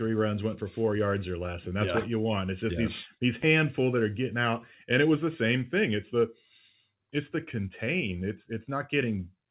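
Clock drift between sender and receiver runs through the whole speech clip. The sending side's clock runs roughly 3 percent slow relative to the receiver, so the jitter buffer keeps draining and the receiver has to fill in by repeating short pieces of audio. Unlike a slowed recording, pitch stays put and only the timing gives way. The hiccups keep stretching it, always in the same direction.

Repeated timing corrections span 0.11 s to 9.18 s. The receiver keeps inserting brief repeats, unevenly spaced, which brings the stretch to about 97 percent speed and adds roughly a fifth of a second overall. Because all edits stretch and none shorten, the corrections all run one way, which separates it from a buffer that alternately overflows and underruns. All of this sits on top of the G.711 call path at 64 kbps, which leaves nothing above 4 kHz.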